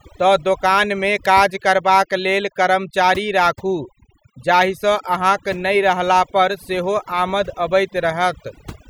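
Overdone noise removal runs through the entire speech clip. A noise reduction process was pushed too hard on a noisy source, so any frequency band that falls close to its estimated noise level gets cut deeply or removed outright. Quieter parts of the speech fall under that threshold and vanish along with the noise. The gaps between phrases drop to near silence scattered with twinkling specks.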